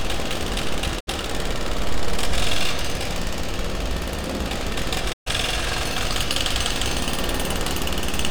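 Digital broadcast dropouts at 0.99–1.09 s and 5.12–5.28 s: the receiver muted on bad frames, with 20 ms fades into holes of roughly 64 and 128 ms, consistent with two and four lost frames.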